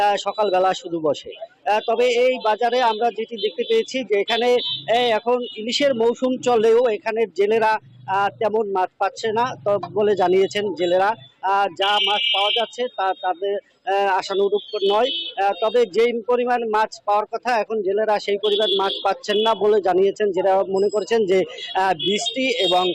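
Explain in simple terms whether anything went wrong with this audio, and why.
Nothing went wrong here; I listened all the way through and didn't hear anything that stood out as a problem.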